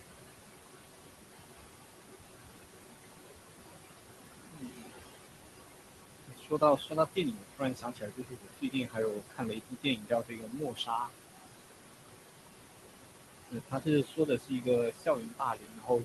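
Noise suppressor artifacts run through the whole clip. The suppressor pulls the room noise down by about 20 dB, frame by frame. That noise sits only about 7 dB under the speech. The noise sinks between the words and rises under them.

Speech cut by the noise suppressor follows at 4.45 to 5.11 s, 6.27 to 11.1 s, 13.51 to 14.68 s, and 14.91 s to the end. The suppressor mistakes quieter speech for noise and drops it by about 19 to 22 dB. The longest span loses roughly four seconds in total. Soft consonants and word endings sound swallowed or faint.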